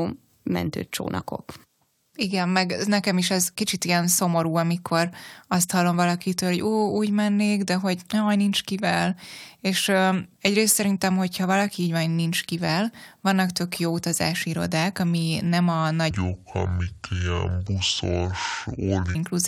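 A section at the wrong speed runs from 16.11 to 19.15 s, starting right after "irodák ami nem a". The speech there plays at 0.583 times its recorded speed, so it slows down and its pitch drops together, about ten semitones, close to an octave lower. The voice suddenly sounds deep, heavy and drawn out. The likely cause is this stretch being played back or resampled against the wrong clock rate.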